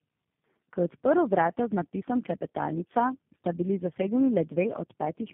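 Rough, muffled and warbly for the whole clip, with nothing above 3.7 kHz. This speech shows tandem speech coding: it sounds like three low-rate speech codecs in a row, likely GSM full rate, AMR-NB and G.729A, each re-coding the previous one's degraded output.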